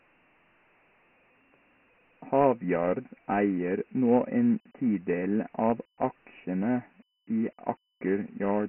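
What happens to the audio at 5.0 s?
At 5.0 s the speech is still coded as Dialogic VOX ADPCM, as throughout the clip. Each sample is stored as a coarse 4-bit step, and 24 kbps fits 6,000 samples a second, cutting everything above 3 kHz. The speech sounds muffled and narrow, with gritty hiss trailing it.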